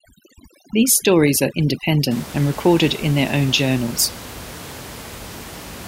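From the start to about 2.11 s, just before "and recorded in their", overdone noise removal acts on the recording. Bands near the noise estimate are gated away, leaving the background dropped and broken up into twinkling specks. A spectrogram shows patchy holes and isolated bright dots between words.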